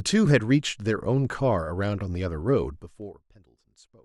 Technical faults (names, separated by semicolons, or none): zipper noise